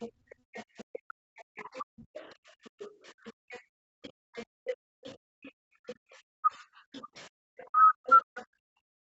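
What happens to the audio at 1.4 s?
At 1.4 s a second voice sits well below the main talker throughout the clip, likely the other side's voice leaking through an echo canceller that left loudspeaker sound in the microphone. It is an added talker, not a loss.

The room tone between 0.09 and 8.86 s dips by up to about 40 dB, for about two seconds in total. This is background gated by the echo canceller: the microphone is clamped while the loudspeaker plays, so only the ambience vanishes and then returns.

From 1.05 s to the end, the talker's own voice drops deeply or cuts out in pieces. This is likely speech suppressed in double talk: both sides overlap, and the canceller turns down the wanted speech itself, not just the background.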